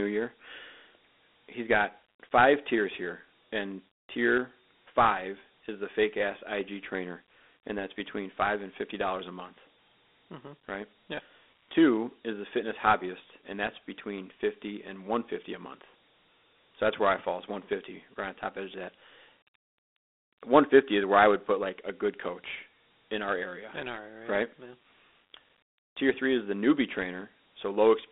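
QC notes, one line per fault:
throughout Dialogic VOX ADPCM: gritty hiss clings to speech, band 250 Hz to 3.6 kHz, nothing above 3.9 kHz; 4-bit step coding, which fits 32 kbps.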